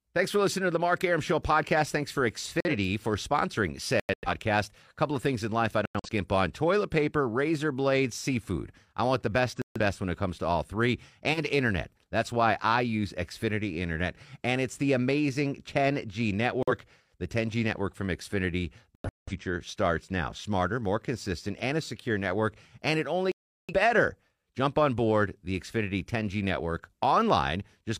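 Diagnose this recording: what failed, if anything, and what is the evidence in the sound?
Codec stage: corrupt frame muted. Abrupt silent holes at 2.60–2.76 s (before "for sponsoring"), 4.00–4.29, 5.85–6.09, 9.56–9.80, 16.62–16.72, 18.95–19.33 and 23.32–23.74 s. The decoder rejected damaged frames and the player substituted silence.

Codec stage: corrupt frame decoded. A brief disturbance peaking around −20 dBFS at 11.33–11.40 s, after "comes to all three". Damaged frames were decoded anyway, misplacing energy across frequencies.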